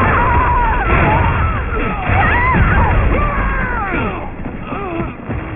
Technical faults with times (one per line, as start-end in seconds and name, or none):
0.00-5.55 aliasing